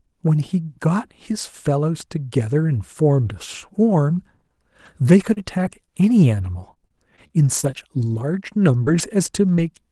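Brief rough, noisier patches at 4.85 s, 5.05 to 5.07 s, 5.23 to 5.40 s, 5.36 to 5.38 s and 5.65 to 5.67 s are each a lost packet rebuilt from error correction: the decoder played the low-bitrate 20 ms copy carried in the following Opus packet. Inside that stretch, from 5.33 to 5.38 s, a smeared wobble is short concealed packet loss: about 40 ms of speech never arrived and the receiver extended the previous sound to cover it. The same thing happens again from 5.85 to 5.89 s, where a 20 ms hole is patched. From 6.59 to 9.60 s the speech picks up scattered short gaps, roughly ten small ticks and hiccups, none longer than about 30 ms, each filled by continuing the last sound. All of this sits on an Opus call path at 32 kbps, whose audio stops at 12 kHz.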